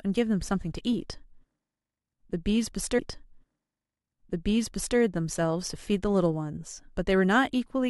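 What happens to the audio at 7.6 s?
Nothing goes wrong at 7.6 s; the speech carries on intact through that moment.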